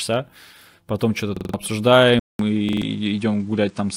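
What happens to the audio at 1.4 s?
At 1.4 s the speech falls into a repeated buffer fault lasting from 1.37 to 1.54 s. Fresh audio failed to reach the output in time, so the device kept replaying its last block, a piece about 43 ms long, which fits a 2048-sample buffer. That block sounds about four extra times with a hard join at each repeat, giving a rapid mechanical stutter near 23 repeats per second. Roughly 150 ms of the original audio is lost.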